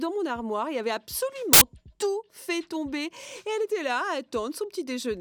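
From 1.53 to 1.61 s a burst of loud, harsh broadband noise replaces the sound for about 80 ms. These are samples built from the wrong bytes: across this stretch the reader assembled each sample's bytes incorrectly, slipping by a byte, reversing their order or assuming the wrong alignment. The rapidly changing low-order bits then became the large part of every value, which turns into loud, harsh noise.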